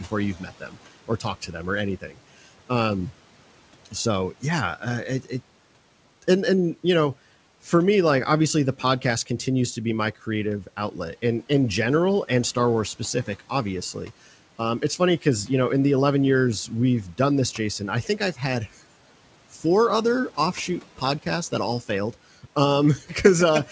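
Speech cut by the noise suppressor happens from 0.39 to 0.77 s and again from 2.01 to 2.18 s. The suppressor mistook parts of the speech for background, so it pulled them down along with the room noise, which sits about 24 dB below the speech. The drop reaches about 10 dB. Only a short stretch of each window is hit: well under a quarter of a second in the first and about a tenth of a second in the second. Those parts sound swallowed and faint.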